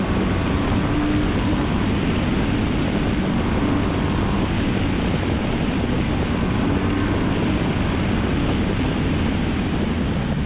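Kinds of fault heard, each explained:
No kinds of fault are heard in this clip.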